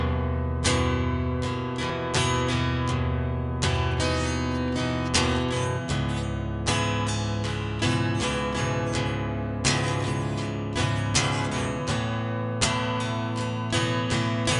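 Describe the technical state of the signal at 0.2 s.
At 0.2 s the sound shows a wrong sample rate, present across the whole clip. Playback runs at about two-thirds speed and pitch sits about 7 semitones low, so everything is slowed and deepened together. That fits 48 kHz material played back at 32 kHz without conversion.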